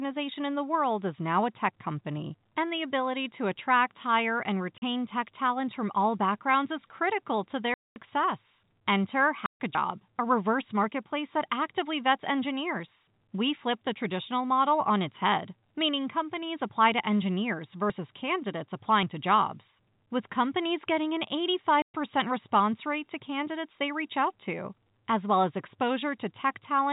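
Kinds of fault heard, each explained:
Packet loss filled with silence: Chunks of the stream never arrived, and the receiver just played dead air where they should have been. You get four hard-edged holes at 4.78, 7.74, 9.46 and 21.82 s, lasting 40, 220, 140 and 120 ms. Every length is a multiple of 20 ms, which suggests 20 ms packets.
Dropped buffer (overrun): There's no silence with these. The audio jumps forward with a small discontinuity, as though a tiny slice of time was cut out and the two ends spliced together. It happens at 9.75 s, losing something like 40 ms, and again at 17.90 s, losing about 20 ms. The likely cause is the software not collecting its samples before the hardware overwrote them. The telephone-band G.711 coding underneath comes through cleanly.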